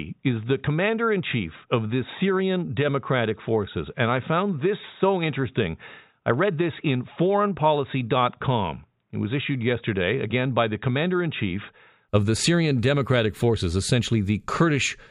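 From the start until 12.09 s the speech sounds dull and boxy, with nothing above 3.8 kHz and its own faint noise floor, about 55 dB down. Just before "of the" it clears abruptly with no gap or level jump, which points to an input switched to a poorer device, likely, rather than a steady filter.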